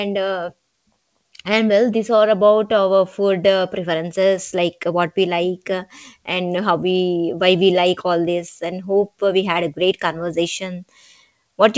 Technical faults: none

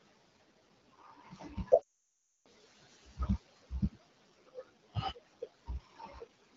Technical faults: AMR wideband (HD Voice) codec; speech cut by the noise suppressor; lost AMR speech frames

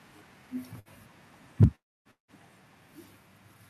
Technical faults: burst of packet loss; microphone overload; microphone volume stepped down; long network dropout

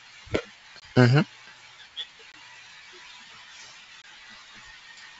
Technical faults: packet loss on an ADPCM call

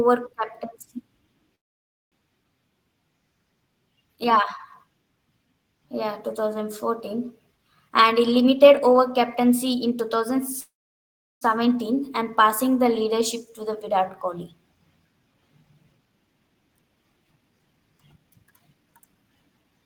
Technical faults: call audio freeze; jitter buffer speed-up

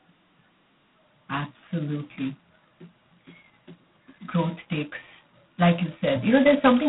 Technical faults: G.726 ADPCM

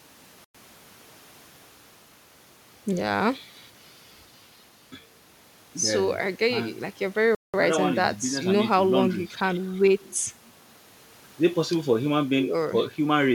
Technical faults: Bluetooth stall

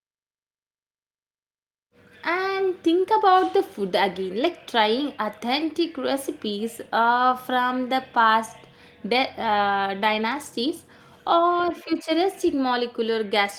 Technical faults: none

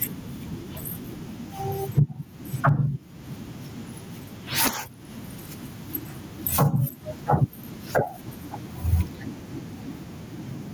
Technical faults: gain pumping

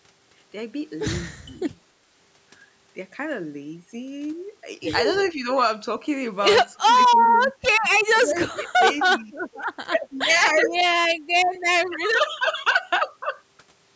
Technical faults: speech suppressed in double talk; echo leak

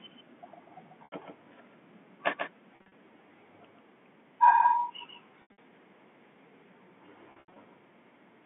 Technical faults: doubled audio track; packet loss with pitch repetition

